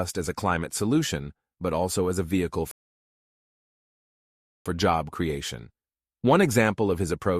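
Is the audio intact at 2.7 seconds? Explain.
No, a rebuffering stall hits at 2.71 s after "also as a vehicle". The player ran dry, leaving 1.94 s of silence before picking up exactly at "job creation" at 4.66 s.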